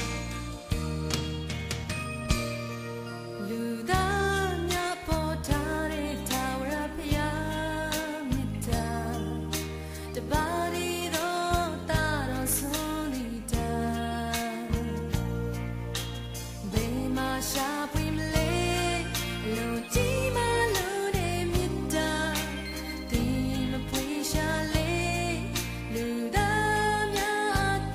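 No faults detected anywhere in the audio.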